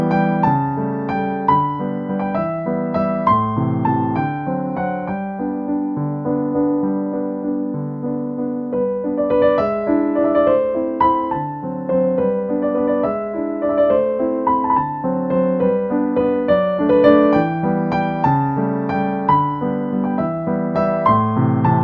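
Nothing here stands out as a technical problem; the audio simply runs along without anything going wrong.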